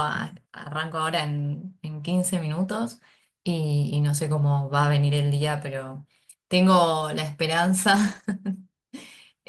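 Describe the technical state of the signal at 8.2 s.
At 8.2 s the speech sits inside a lost packet rebuilt from error correction (7.91–8.25 s): low-bitrate backup copies fill the losses, so it sounds rough and noisy but never gaps.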